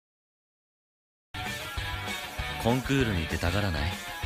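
Cut-off start at 1.34 s: after digital silence, the audio begins abruptly mid-sound with no natural attack, because the recording or stream began late.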